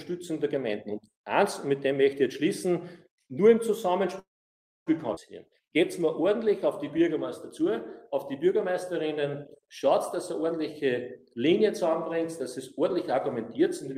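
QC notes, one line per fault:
4.19–4.89 s, call audio freeze: the sound stalls for about 0.67 s, a brief fading continuation then roughly 0.62 s of silence, likely from packets held up and an emptied jitter buffer; playback resumes where it stopped.
5.14 s, skip ahead: playback jumps forward with only a tiny 20 ms bridge, dropping roughly 0.4 s of audio, so the material either side is butted together almost directly.
5.61–7.10 s and 7.60–9.87 s, jitter buffer slow-down: repeated single pitch periods add 89 ms and 111 ms, running at 94% and 95% speed, drawn out at unchanged pitch.
10.16–10.54 s and 12.57–13.97 s, jitter buffer speed-up: short pitch-period pieces are cut, roughly 70 ms then 50 ms, running at 117% and 104% speed, the first sounding hurried, both at the same pitch.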